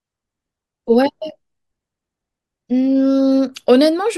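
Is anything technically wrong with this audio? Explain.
No, nothing technically wrong stands out here; the speech comes across without any dropouts, glitches or other faults to point to.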